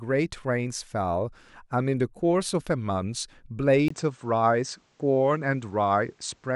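Input switched to a poorer device at 3.88 s: after a 20 ms gap, the speech dulls with nothing above 8.6 kHz, over a faint new noise floor, likely another microphone.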